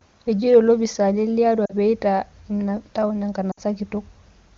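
Lost AMR speech frames hit at 1.65 to 1.74 s and again at 3.51 to 3.60 s. In each case a short run of frames arrived corrupted, and the decoder covered the gap by repeating the last good pitch and vocal tract settings at falling gain. This makes the speech smear and sag briefly before it recovers. The first gap is 40 ms, which fits two lost frames. The second is 60 ms, which fits three, so it runs one frame longer and drops to near silence against the clean wideband sound around it.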